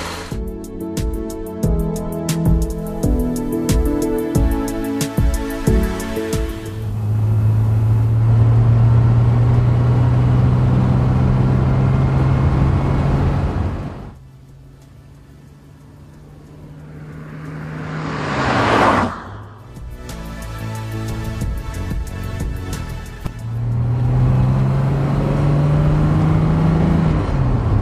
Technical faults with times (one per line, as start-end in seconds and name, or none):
2.52-8.33 digital radio blending to analogue